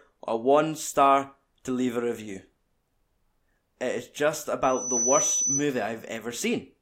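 Right after "is just", at about 4.63 s, a loudspeaker feedback squeal kicks in and hangs on until around 5.66 s. It's a single piercing tone at 6 kHz that swells up over roughly a third of a second and ends up sitting a few dB louder than the speech. What's happening is the mic is hearing its own loudspeaker, and at that one frequency the loop gain tips past unity, so the tone keeps feeding itself.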